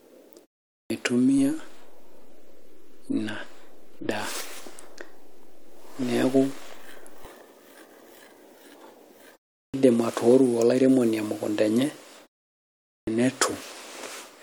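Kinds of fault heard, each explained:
clipped start after a pause: Speech resumes abruptly out of silence with its opening sounds missing, at 0.81 s after a 0.43 s gap, at 9.64 s after 0.35 s, and at 12.98 s after 0.79 s. Each time roughly 90 to 97 ms of onset is swallowed. The output device drops into a low-power state during the quiet and needs that long to wake or relock, so the first fraction of each phrase never reaches the output.
DC step: A low thump marks 1.38 s, with another where the shift ends at 7.25 s, while the speech carries on unchanged through both. The waveform's zero line jumps to a new offset and holds there for nearly six seconds before returning. That fits a converter recalibrating, or an input carrying a standing offset being switched into the path. The sudden baseline shift itself produces the thud.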